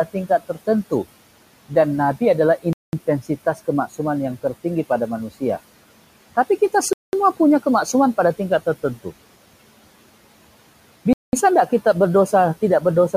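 A short speech recording with two distinct faults. The first is speech cut by the noise suppressor between 0.13 and 0.68 s. Within that stretch, a total of roughly a tenth of a second of speech is pulled down by as much as about 12 dB, so the affected sounds come out faint and swallowed. The suppressor judged those low-level parts of the speech to be background and attenuated them along with the room noise, which sits about 20 dB below the speech. The second fault is a gap between chunks, heard three times as a 200 ms hole: 2.73 to 2.93 s, 6.93 to 7.13 s (just before "punya kemaksuman pada tingkat"), and 11.13 to 11.33 s. The exact 4.2 s spacing points to audio handled in 4-second chunks, with silence inserted at each join. Nothing is missing from the speech at these points; it simply stops and resumes, which suggests padding or late playback start at each chunk boundary.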